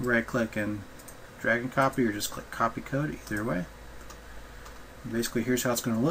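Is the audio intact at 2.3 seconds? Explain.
Yes, the audio at 2.3 seconds is intact, with no dropout, glitch or other fault at that moment.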